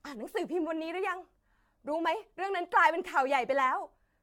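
Generation loss runs throughout the speech: swirly, hollow, smeared, with blurred attacks, likely from roughly ten successive re-encodes, consistent with AAC-LC at about 96 kbit/s.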